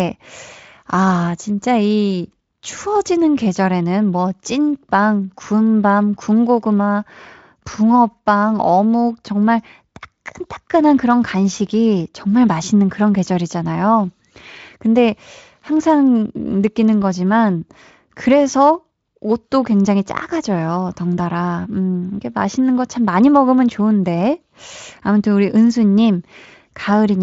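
Hard clipping at 23.26 to 23.51 s: for about a quarter of a second the speech runs roughly 1 dB past what a stage in the chain can pass, so its loudest peaks are cut flat. Those squared tops add high harmonics, heard as brief crackle on the peaks, above the light Speex coding.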